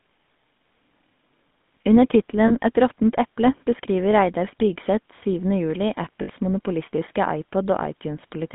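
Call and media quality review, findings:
GSM full-rate codec, whole clip: buzzy, gravelly roughness on all speech. The coding is consistent with 13 kbps full-rate GSM. Audio is band-limited to 150 Hz to 3.6 kHz, and the codec damage is plainly audible.

Spectrogram: a hard ceiling at 3.6 kHz with nothing above it. Harmonics look smeared and coarse, because the excitation is rebuilt from regularly spaced pulses rather than the real waveform.

Lost GSM frames, 2.48–2.51 s: a brief metallic ring holds the sound. The 20 ms gap fits a single frame, which the decoder filled by repeating the last good frame.

Lost GSM frames, 6.22–6.30 s: a longer rough, ringing hold. The 60 ms gap points to three consecutive frames concealed the same way. Spectrogram: static, repeated bands across the gap.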